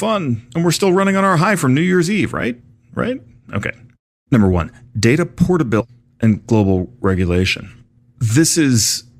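At 5.80 s a stream segment was likely skipped: one chunk of the segmented stream failed to load, and the player moved straight on to the next, leaving out whatever that chunk held. In the speech, the flow breaks abruptly between 5.80 and 5.86 s. There is a short blip at the join, and the talk then resumes a second or more further along than it should, so the delivery seems to lurch forward.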